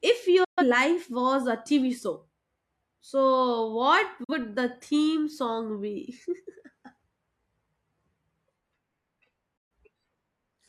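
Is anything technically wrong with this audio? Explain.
Yes. There is digital broadcast dropout at 0.44 s (just before "life was a"), 4.24 s (after "so what") and 9.57 s. The receiver discarded corrupted frames and muted, with an 8 ms fade into silent holes of 128, 43 and 128 ms. Unlike packet-loss concealment, nothing fills these gaps.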